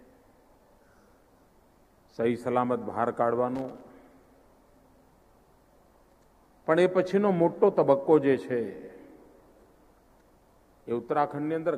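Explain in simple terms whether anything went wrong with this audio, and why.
Something did go wrong, briefly: from 3.55 to 3.81 seconds there is a loose connector crackle, an irregular scratchy burst lasting about a quarter of a second. It happens when a worn or dirty plug contact shifts and rapidly connects and disconnects, chopping the sound on and off. Unlike a single digital click or a clean dropout, it is a ragged cluster of uneven crackles rather than one tidy tick or gap.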